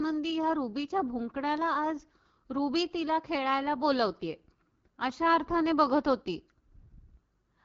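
Across the whole speech clip, AMR wideband (HD Voice) codec damage is plainly audible. The codec models the signal up to 6.4 kHz with a pulse-excited vocal tract filter, then pads 6.4 to 7 kHz with shaped noise. Here the rough, raspy texture points to one of its two lowest rates, which fits 8.85 kbit/s. On a spectrogram the energy stops sharply near 7.5 kHz, and the top band looks smeared and noise-like.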